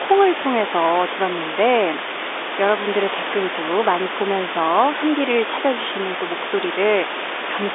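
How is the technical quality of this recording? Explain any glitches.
No glitches or technical faults can be heard anywhere.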